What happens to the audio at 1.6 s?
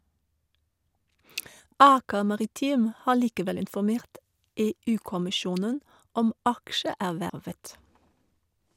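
At 1.6 s a compressed frame is skipped: one roughly 26 ms frame never plays, so the speech jumps ahead about 30 ms.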